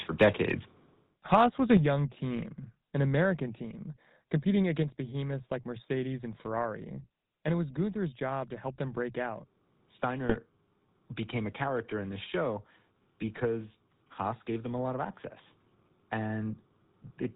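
Speech coded with the GSM full-rate codec throughout, with plainly audible codec damage: the sound is modelled as a vocal-tract filter fed by regular pulses, with only every third excitation sample kept and nothing above 4 kHz, giving a buzzy, gravelly roughness that fits a 13 kbps stream. Microphone overload appears at 0.21–0.28 s and 1.71–1.75 s, about 4 dB and 3 dB over the limit, with roughly 7 and 4 percent of samples clipped there; the likely cause is input gain set high enough that peak tops were sheared off, adding a crackling edge. A microphone volume step-down follows at 1.77 s, dropping voice and background together by about 6 dB just after that second overload, and again at 4.83 s by about 3 dB, likely the call software cutting the device's input gain in a single step. GSM bit errors hit at 10.28–10.37 s, a span that fits about four frames, where corrupted filter, pitch or gain values reaching the decoder twist the spectrum and level, so the sound breaks into squawks and gargling.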